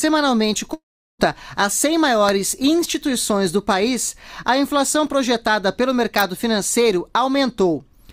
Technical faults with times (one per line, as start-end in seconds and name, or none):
0.73-1.21 long network dropout
2.29 electrical switching spike
6.19-6.21 electrical switching spike